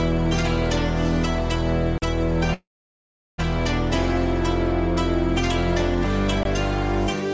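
The audio comes through a call path with nothing above 8 kHz, which fits a G.722 wideband codec. Two blocks of digital silence cut in abruptly, from 1.98 to 2.02 s and from 6.43 to 6.45 s. They last 40 ms and 20 ms. From 2.54 to 3.40 s there is a call audio freeze. The last sound is stretched into a fading fill, and about 0.75 s of that is near silence. The audio then resumes where it stopped, so an 0.84 s gap is inserted and nothing is lost. The likely cause is delayed packets draining the jitter buffer.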